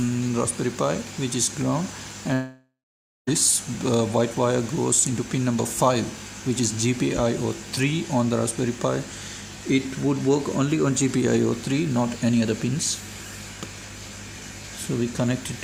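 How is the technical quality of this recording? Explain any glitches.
One glitch stands out. From 2.33 to 3.29 s the sound turns into a fading buzz, then about 0.5 s of near-silence, and resumes with roughly 0.94 s missing. This is likely a long network dropout: the receiver extended the last audio until it decayed, then output nothing until packets returned.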